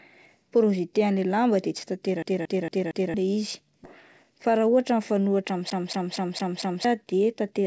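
Speech carried over a call link whose audio stops at 8 kHz, consistent with G.722, and it has several faults. From 2.23 to 3.14 s and again from 5.70 to 6.85 s, the same 0.23 s fragment repeats four and then five times with a brief mute at each jump. This is the even stutter of a CD stuck on one turn, where a scratch sends the laser back a track every revolution. At 3.84 s the audio leaps forward with no gap, losing about 0.7 s. This is a skip ahead, where a stretch was discarded while later audio was already queued. From 4.23 to 5.42 s the speech runs about 9 % fast at unchanged pitch and sounds hurried. This is a jitter buffer speed-up, in which the receiver trimmed roughly a tenth of a second of pitch periods to reduce excess delay.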